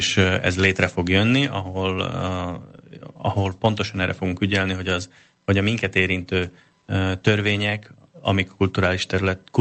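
At 1.47 s the speech drops by about 3 dB in one step, most likely the microphone volume stepped down by the call software's gain control.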